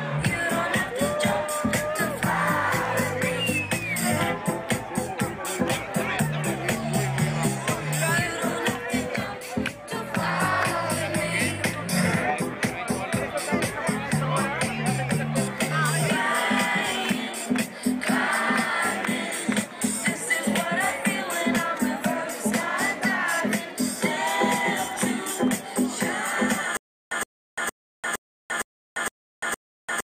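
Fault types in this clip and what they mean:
Stutter with silent gaps: from 26.77 s to the end, a 118 ms burst repeats seven times, each followed by 344 ms of silence, likely a stalled stream retrying.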